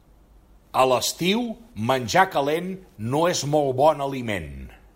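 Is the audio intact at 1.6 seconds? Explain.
Yes, the speech at 1.6 seconds is intact, with no audible fault at that moment.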